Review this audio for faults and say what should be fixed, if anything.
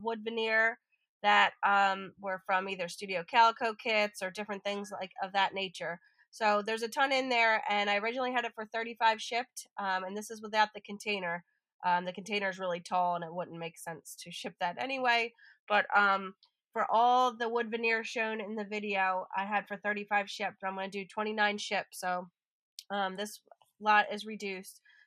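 Nothing in this recording calls for a fix, as no faults can be heard anywhere in it. It needs no repair work before use.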